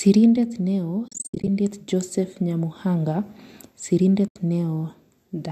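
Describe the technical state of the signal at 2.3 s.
At 2.3 s the speech is intact, with no dropout, click, distortion or other fault at that moment.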